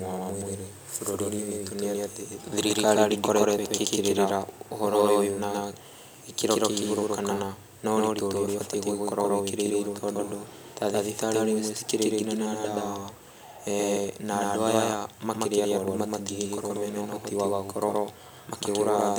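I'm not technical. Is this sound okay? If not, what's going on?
No. There are two problems.

The first is a doubled audio track. The speech plays twice at once. A second copy runs about 150 milliseconds behind, roughly a sixth of a second. It is about as loud as the first. This lasts the whole clip. It sounds like a hard, flat echo with no room to it. The likely cause is that the sound was captured twice, with one path slower than the other.

The second is clock drift buffer slips. You hear a small click at a steady beat, about every 1.87 seconds. The clicks run from 1.63 seconds to 18.47 seconds, roughly ten in all. Two pieces of equipment likely keep slightly different time. The gap between them builds up. Then a tiny scrap of sound gets dropped or repeated, and that makes the click.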